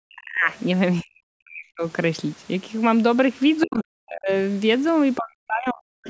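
Speech from a call, where the echo canceller likely misread moments when both sides talked at once and clamped down on the microphone. The result is speech suppressed in double talk: the voice dips by as much as roughly 40 dB or breaks up at 0.0–0.48 s, 1.02–1.84 s, 3.65–4.31 s and 5.17–6.01 s. The same canceller likely also failed to strip out all of the loudspeaker signal, so the other side's voice leaks through as scraps at 0.50–0.56 s, 3.61–3.80 s and 6.04–6.08 s. The clearest of these is near 3.7 s, sitting roughly 15 dB below the talker.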